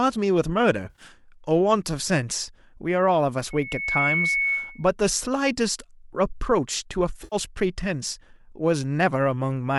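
Around 0.86 to 1.02 s there's a short patch of AAC frame loss with concealment. Roughly 80 ms of audio goes missing, scattered over about 120 ms, with the longest gap around 50 ms. The decoder papers over the holes by reusing the last good spectrum, so the speech turns smeared and a bit phasey there instead of dropping out. The gap pattern fits several short frames of about 10 ms each.

From 3.50 to 4.86 s you get a loudspeaker feedback squeal. A 2.2 kHz tone creeps up over about half a second as the mic picks up the speaker it's feeding and the loop runs away at that one frequency. It ends up about as loud as the speech itself, a steady whistle sitting on top of everything until it stops at 4.86 s.

The same frame-loss concealment comes back at 7.24 to 7.36 s, again about 80 ms lost, with the same brief smeared, noisy patch where the decoder fills the gap. There's also a faint grainy edge to the speech, most likely from low-delay AAC-ELD compression at around 64 kbps.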